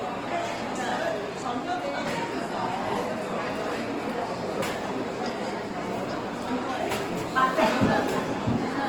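Throughout the audio, tonal parts turn grainy, rough and noisy, a plainly audible texture that points to Opus compression in its CELT music mode, likely at a low bitrate around 16 kbps. Short of bits, the encoder fills bands with noise, while the bandwidth still reaches about 20.1 kHz.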